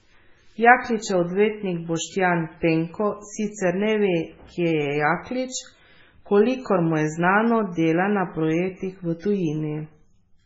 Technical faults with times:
0.00-10.45 MP3 compression

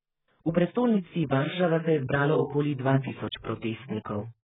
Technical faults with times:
0.00-4.45 AAC compression

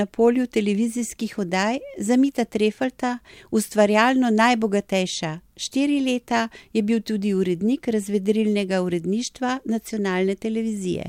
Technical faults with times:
none

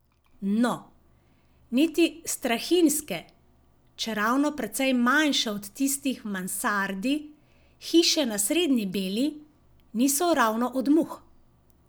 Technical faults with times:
none

